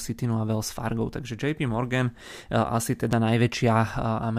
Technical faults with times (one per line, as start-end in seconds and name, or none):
0.15-4.24 word clock ticks